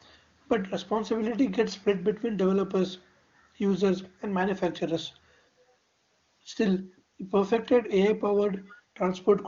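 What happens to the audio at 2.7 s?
Nothing goes wrong at 2.7 s; the speech there comes through intact, carried by the AMR wideband (HD Voice) codec at a rate high enough that it sounds clear.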